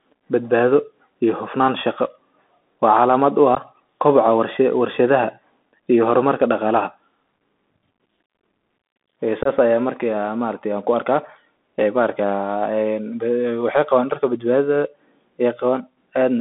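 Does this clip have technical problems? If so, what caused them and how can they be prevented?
Yes. Throughout, the speech sounds narrow and boxy, confined to roughly 200 Hz to 3.5 kHz, with scratchy s sounds and a grainy hiss underneath. That points to the Bluetooth CVSD headset codec, whose one-bit delta steps, consistent with a 64 kbps link, can't track sharp high-frequency detail. Using a headset and phone that negotiate wideband mSBC or LC3 voice prevents this.

At 3.55 s and 9.43 s the speech drops out abruptly for about 15 ms and 22.5 ms, leaving short holes with hard edges. This is unconcealed Bluetooth headset packet loss: a couple of voice packets, then about three, never arrived and nothing filled the gaps. Keeping the headset close to the phone, away from Wi-Fi and other 2.4 GHz interference, prevents these dropouts.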